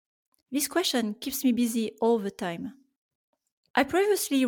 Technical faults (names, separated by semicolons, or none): none